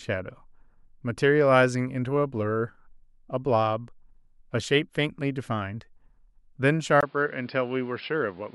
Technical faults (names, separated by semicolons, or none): input switched to a poorer device